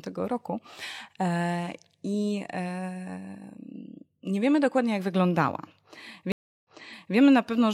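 A stream reconnect occurs at 6.32 s and runs to 7.16 s. The connection dropped, so playback goes silent for about 330 ms while the player re-establishes the link and starts a new decoder partway through the stream. When sound returns it jumps back about 0.51 s, so the listener hears half a second of speech a second time. This fits a server resending a burst of recent audio after the reconnection.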